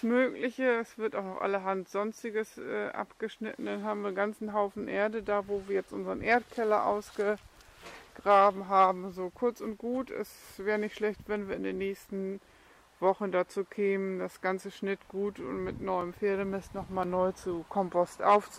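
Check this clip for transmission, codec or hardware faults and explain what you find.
One hardware fault is present: periodic USB or driver dropouts between 14.99 s and 18.07 s. About four short gaps, each a few milliseconds long, occur every 1.024 s. Something is stalling the USB bus or the audio driver on a fixed timer, and the samples lost in each stall are replaced with silence. Each gap is heard as a regular tick. On a waveform, it looks like a brief flat notch cut into the signal. On a spectrogram, it appears as an evenly spaced column of thin vertical broadband lines.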